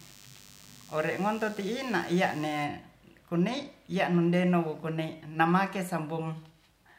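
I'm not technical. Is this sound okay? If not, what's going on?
No. A DECT cordless phone buzz runs from the start to 2.64 s: a thin, steady hum under the speech. A nearby cordless phone sends radio bursts 100 times a second, and the recording gear picks them up as a quiet, faint buzz.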